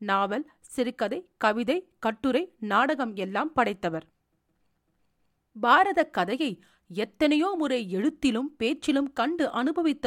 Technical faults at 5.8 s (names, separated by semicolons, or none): none